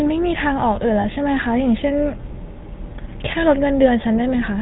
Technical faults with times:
0.00-4.61 GSM full-rate codec
1.00-1.05 lost GSM frames

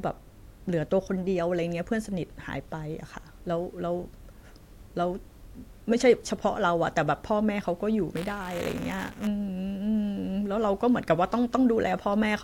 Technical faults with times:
8.15-9.27 buffer tearing

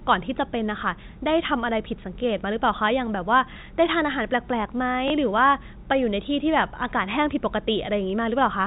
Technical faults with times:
3.54-3.56 packet loss with last packet repeated
5.08 packet loss with last packet repeated

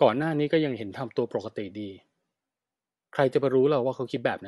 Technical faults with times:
0.00-4.47 Bluetooth LC3 compression

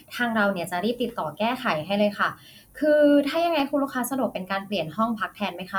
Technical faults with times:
3.14-3.75 CD scratch ticks

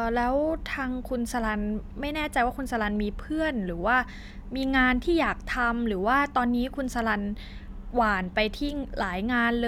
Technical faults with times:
none

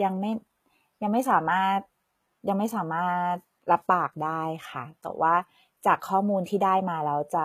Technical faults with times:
0.00-7.44 HE-AAC compression

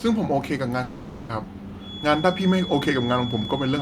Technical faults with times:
0.83-1.31 long network dropout
1.76-3.82 feedback whistle

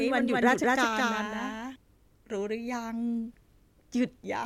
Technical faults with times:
0.00-1.76 doubled audio track

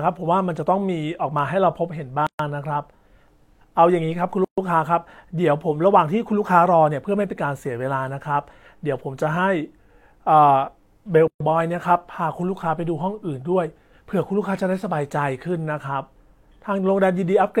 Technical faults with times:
2.27-2.39 gap at a join of encoded pieces
4.44-4.58 gap at a join of encoded pieces
11.28-11.40 gap at a join of encoded pieces

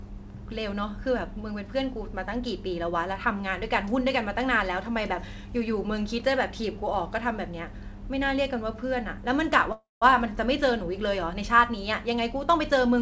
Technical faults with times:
9.72-10.03 call audio freeze

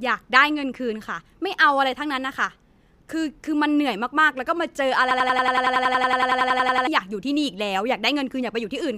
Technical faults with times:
5.11-6.87 system hang loop

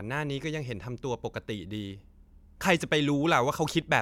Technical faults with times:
none

